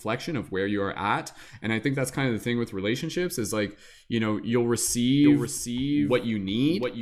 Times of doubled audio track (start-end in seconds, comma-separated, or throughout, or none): 5.24-7.01